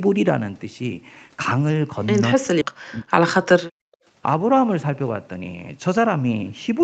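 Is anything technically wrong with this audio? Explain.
Yes, there are two faults, both in the middle of the clip.

From 2.36 to 3.84 s the speech drops sharply in level, by about 40 dB at its deepest. This is likely speech suppressed in double talk: with both ends talking, the echo canceller couldn't tell this talker from loudspeaker echo and attenuated both.

From 2.61 to 2.72 s there is a skip ahead: roughly 0.7 s of speech is dropped and playback jumps straight to later audio with no fill. Buffered audio was discarded while later audio was already waiting, so the stream could catch up, leaving an abrupt splice.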